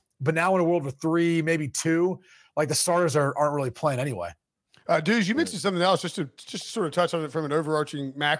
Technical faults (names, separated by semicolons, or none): none